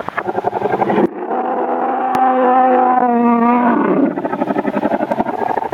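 Gain pumping runs from start to finish, with a gain swing of around 20 dB. Loud and soft passages sit unnaturally close in level, and the whole sound feels squashed and breathing. The likely cause is input gain set far too high, with a fast limiter or compressor clamping down on each peak and releasing between them.

From 1.06 to 2.15 s, one channel is inverted. The level drops by about 23 dB, and what remains is a faint copy. Anything common to both channels cancels, leaving only their difference. This likely comes from reversed polarity on one stereo channel, heard here after the two are summed to mono. Full level returns at 2.15 s.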